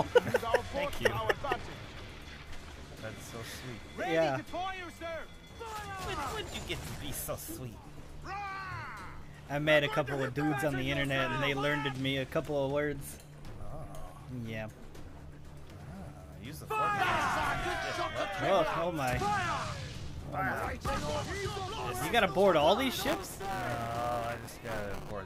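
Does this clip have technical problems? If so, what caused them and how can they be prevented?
Yes. From 23.00 to 25.11 s a robotic 200 Hz buzz rides on the sound: buffer tearing. Writer and hardware reader have slipped, so a small slice of every 5 ms period repeats audio about 10 ms old. Keeping writes synchronised with the read pointer prevents it.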